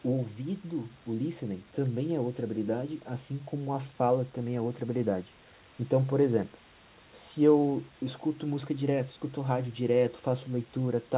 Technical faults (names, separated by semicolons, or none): none